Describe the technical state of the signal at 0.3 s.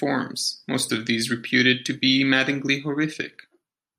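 At 0.3 s the speech signal is intact, with no dropout, distortion, glitch or other fault present at that moment.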